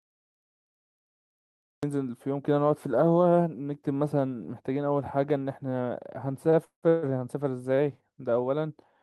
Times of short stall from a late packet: 7.74-7.80

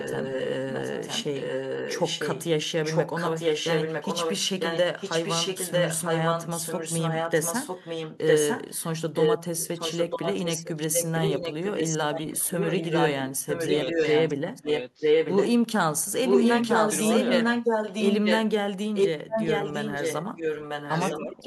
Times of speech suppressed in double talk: 14.60-14.67

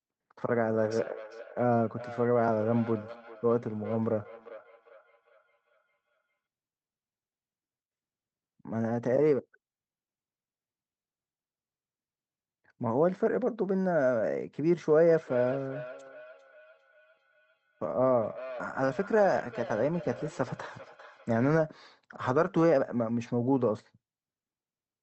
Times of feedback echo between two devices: 0.70-6.38, 15.07-21.64

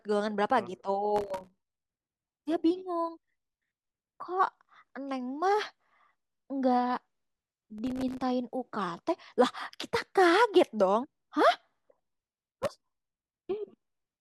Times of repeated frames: none

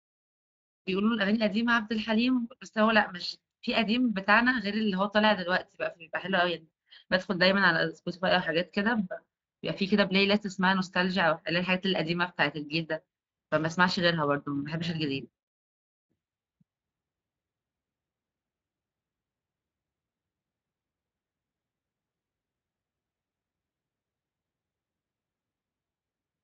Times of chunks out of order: none

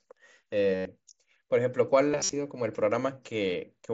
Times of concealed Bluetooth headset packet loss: 0.75-0.85, 2.12-2.33

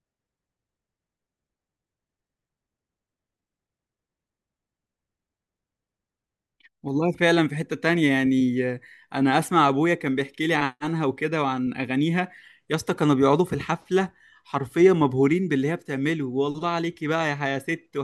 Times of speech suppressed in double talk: none

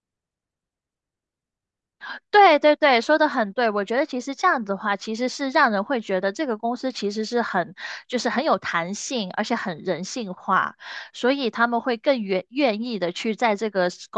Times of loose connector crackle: none

